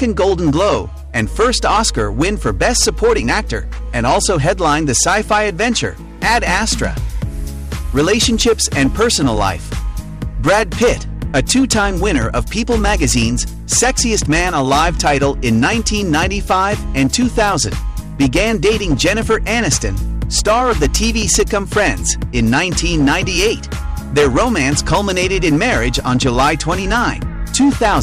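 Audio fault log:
Throughout, hard clipping: the signal is driven about 12 dB past what the stage can pass, so every peak above that ceiling is sheared flat, roughly one sample in twenty. Those squared-off tops throw energy into high harmonics, giving a harsh fuzz on each loud moment. Unlike soft saturation, which rounds peaks and adds warmth, this edge is abrupt and brittle, and it tracks loudness rather than sitting on the whole sound like noise.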